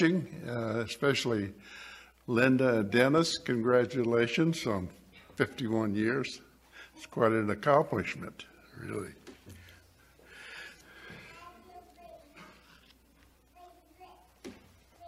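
There's a single loud pop at about 3.18 to 3.21 s, a sharp thump that sits a few decibels above the surrounding sound, which carries straight on beneath it. It's likely a voltage spike from a plug, switch or static discharge reaching the signal chain.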